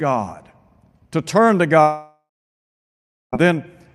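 Speech, interrupted by a likely long network dropout from 1.81 to 3.34 s: the last sound fades out as a buzz or hiss, then 1.06 s of silence, and speech resumes without the lost stretch.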